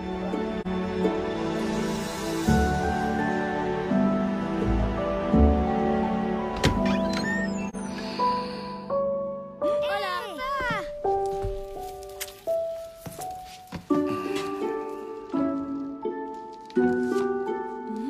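There are two short dropouts, at 0.61 to 0.67 s and again at 7.69 to 7.75 s, each a brief dip of about 43 ms, which fits a single AAC frame lost with muting: the decoder zeroed that frame, and the overlapping windows fade the sound out and back in.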